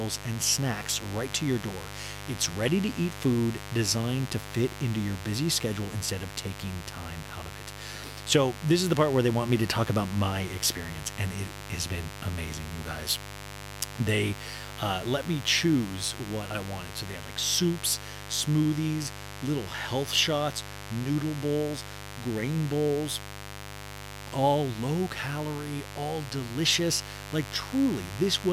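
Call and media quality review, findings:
Mains buzz, present throughout the speech. Steady raspy buzz on a 50 Hz base, harmonics extending into the kHz range, loud, around 10 dB below the speech. Probable component: dimmer, rectifier or unshielded cable in the capture path. Mechanism: sharp switching spikes, twice per mains cycle, coupling into the signal. Check grounding and shielding first.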